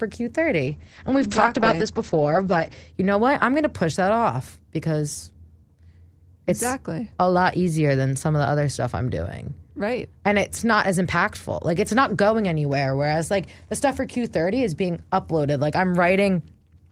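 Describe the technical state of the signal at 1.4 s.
At 1.4 s the speech sounds muffled and rough and watery, with nothing above 8 kHz. This is a call bitrate drop from 0.69 to 2.95 s. The encoder was starved of bits, consistent with a fall from about 32 to 9 kbps, so it coded coarsely and narrowed the band.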